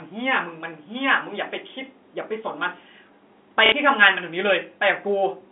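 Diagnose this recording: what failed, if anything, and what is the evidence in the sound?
The network stage failed: packet loss with last packet repeated from 3.66 to 3.72 s, 60 ms of audio filled by replaying the previous packet, which fits two 30 ms packets. The waveform shows an identical block copied; the spectrogram shows smeared, frozen harmonics, heard as a brief robotic stutter over the narrow G.711 telephone band.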